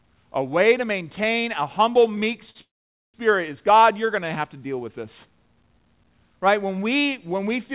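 At 2.50 s the speech catches for a moment, a short stall from a late packet. One packet missed its playout time and the jitter buffer ran dry, so the receiver stretched the last sound for about 45 ms until the packet turned up, then resumed from the same point. No speech is lost. The held sound comes across as a brief drawn-out smear with a faint buzz or dip, and everything after it runs about 45 ms late.

Just after, from 2.61 to 3.16 s, the audio stops for roughly half a second. The receiver fills the 529 ms gap with a short fading buzz or hiss that gives way to about 480 ms of silence, then the speech picks up where it left off with nothing missing. This is a call audio freeze, most likely caused by packets being held up in transit long enough to empty the jitter buffer. The rest of the clip now lags a further 529 ms. Through both events the band stops at 4 kHz, which points to a G.711-type narrowband call codec.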